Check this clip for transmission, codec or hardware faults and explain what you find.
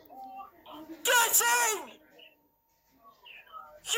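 No transmission, codec or hardware fault can be heard anywhere in the clip.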